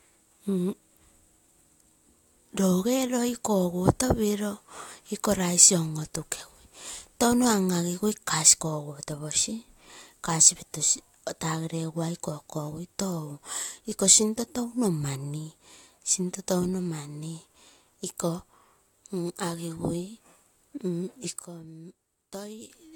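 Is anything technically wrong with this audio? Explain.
Yes. At 21.42 s the speech suddenly drops in level by about 12 dB and stays down until 22.70 s. This is a sudden gain jump. The likely cause is a gain setting applied instantly, with no ramp. The background noise falls together with the speech.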